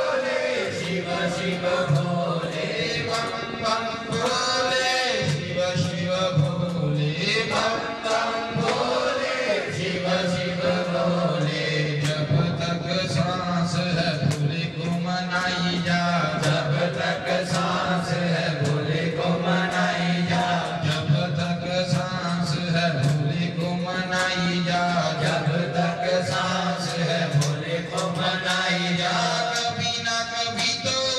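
No technical faults can be heard anywhere in the recording; the signal stays steady and intact throughout.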